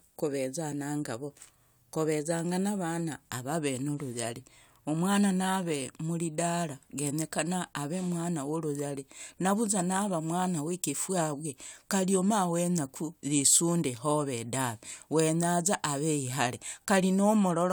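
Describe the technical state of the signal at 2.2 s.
At 2.2 s the speech signal is intact, with no audible technical fault at that moment.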